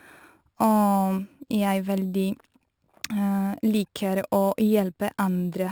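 It's a speech clip with imaging from sample-and-hold upsampling running the whole way through. Someone took 12 kHz material up to 44.1 kHz by just repeating samples, no smoothing filter, so mirror images of the spectrum appear above the original band. The first copy sits between 6 and 12 kHz at about 22 dB below the speech, giving a bright metallic fizz that rides the level, and its tones move against the pitch.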